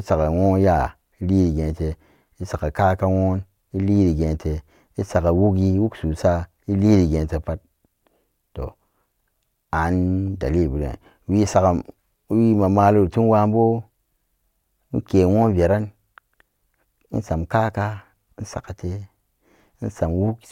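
Nothing in this recording of speech stands out as a technical fault at any point, so there's no fault to describe here.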